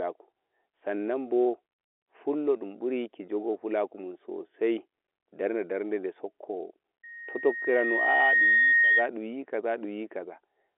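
Loudspeaker feedback squeal runs from 7.03 s to 9.09 s in this telephone-band speech. A microphone is picking up the loudspeaker it drives, and at 1.9 kHz the loop gain goes above one, so that frequency feeds on itself. A pure tone swells over about a second and a half until it sits somewhat louder than the speech, then holds as a piercing squeal before stopping at 9.09 s. The tone falls well inside the telephone line's band, which cuts everything above about 3.8 kHz.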